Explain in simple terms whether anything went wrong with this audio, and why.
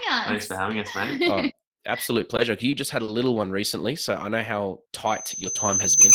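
Two things go wrong in the clip.

From 2.19 to 3.10 s, just before "little one recently so", the speech catches and hiccups four times, each catch no longer than 30 ms. These are repeated stalls (stutter): the data carrying the sound arrived late, so the player ran out of audio and briefly stretched the last bit of sound while it waited, about 80 ms in all. Nothing is lost, but the speech sounds jerky there.

From 5.06 s to the end, right after "so I know how", a thin, high whistle at about 6.2 kHz rises over roughly a second until it is louder than the speech. That is loudspeaker feedback squeal: a microphone picked up the loudspeaker it was feeding, and that one pitch kept going around the loop, growing louder each time.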